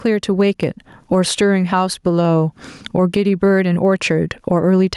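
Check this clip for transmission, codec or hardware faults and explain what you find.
Two faults stand out: level pumping across the whole recording, and one isolated click early on.

Gain pumping runs throughout. Loud and quiet syllables sit unnaturally close in level, with a swing of about 15 dB, and the speech sounds squashed. The likely cause is input gain set far too high, with a fast limiter or compressor clamping down on each loud moment and releasing in the gaps.

Dropped samples show up at 0.63 s as a single sharp click, a thin vertical line through the spectrum. Nothing audible is missing around it, because the gap lasts only a tiny fraction of a millisecond. What's heard is the waveform jumping abruptly from one value to a later one. That points to a few samples likely lost from the stream in capture or transfer.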